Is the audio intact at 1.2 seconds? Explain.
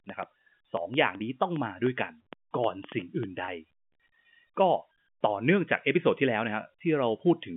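No. From 1.17 to 1.20 s there is packet loss with pitch repetition: a single packet, about 30 ms of speech, went missing, and the receiver filled the hole by repeating the last pitch period it had. Because the gap is so short, it sounds like a slightly held, buzzy sustain rather than a break. Unlike a plain dropout, there is no silence or click, just a brief frozen tone before the speech resumes.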